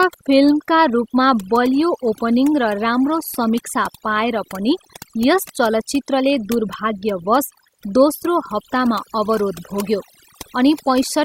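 From start to finish this speech carries overdone noise removal. A noise reducer was pushed too hard, so any frequency band sitting close to what it judged to be noise got pulled right down or switched off, taking the softer parts of the voice along with it. You hear it as a background that drops away and breaks up into little twinkling specks.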